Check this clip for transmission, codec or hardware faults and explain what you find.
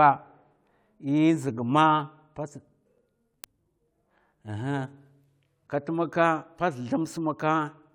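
One fault is present: CD scratch ticks in the speech from 2.76 s to 4.55 s, starting just after "ma pats". There are nine ticks at a steady rate of about five per second, each only a few milliseconds long and of uneven strength. Each turn of the disc carries a blemish past the laser that destroys more data than error correction can rebuild, so the player briefly interpolates or mutes. The strict periodicity sets this apart from random vinyl crackle or irregular packet-loss dropouts.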